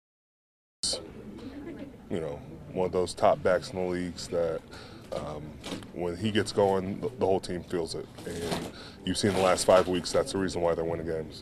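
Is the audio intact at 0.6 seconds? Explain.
No, at 0.6 seconds you're still in the dead air of a cut-off start. From 0 to about 0.83 s the file is pure digital silence, because capture began late and missed the opening. Then at 0.83 s the sound just switches on mid-stream, with no natural attack or fade-in leading up to it. So at 0.6 s there's nothing to hear; the first real audio arrives about a quarter of a second later.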